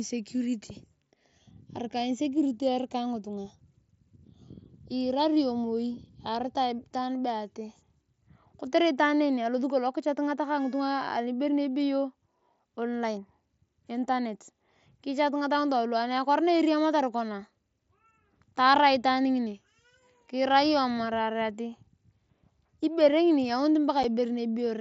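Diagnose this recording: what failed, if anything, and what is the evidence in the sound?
A single short hole with hard edges cuts through the speech at 24.03 s, a dropout of about 7.5 ms. The cause is unconcealed Bluetooth headset packet loss: one voice packet on the wireless link was lost and replaced with silence or an idle pattern, heard through the mSBC codec's 8 kHz wideband speech.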